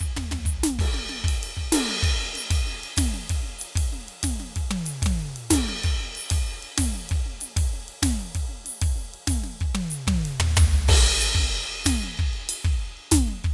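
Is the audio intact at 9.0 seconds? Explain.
Yes, at 9.0 seconds the music plays through intact, with no dropout, click or other fault at that moment.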